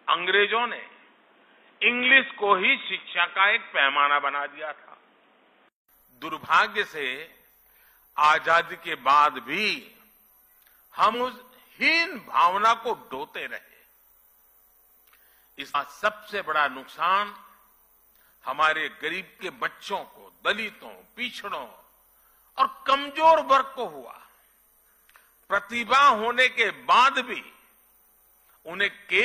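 From the start to 5.89 s, the sound is dull and boxy. Nothing reaches above 3.8 kHz. A different background noise sits roughly 40 dB under the signal. At 5.89 s a 200 ms silence falls, then the sound opens up and the level shifts by a few decibels. This is likely an input switched to a poorer device, later restored.

At 11.10 s and again at 15.70 s, the audio jumps ahead. About 100 ms goes missing each time. This is compressed frames skipped, with the gap fitting two frames of 46.4 ms.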